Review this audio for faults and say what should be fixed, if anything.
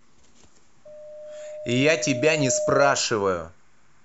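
Loudspeaker feedback squeal runs from 0.85 to 3.10 s. The microphone hears its own loudspeaker, and the loop gain passes one at 607 Hz. The tone swells over about two seconds to a few decibels above the speech, showing as a thickening horizontal spectrogram line. Lowering the gain or notching 607 Hz prevents it.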